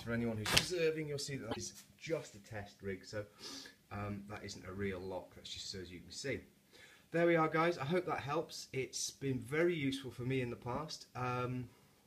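At 1.48 to 1.57 s, damaged data in the compressed stream makes the decoder misread frames and lose sync, producing a brief chirp, squawk, click or short hole.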